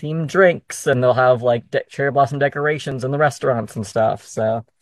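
Around 0.93 to 0.97 s the speech skips forward, and the same thing happens again at 2.92 to 2.95 s. That's overlap between stream segments. Two neighbouring chunks claimed the same stretch of time, so the player trimmed roughly 30 ms of real audio, and the waveform jumps across the gap. The two hits land about 2 s apart, matching a 2 s segment length.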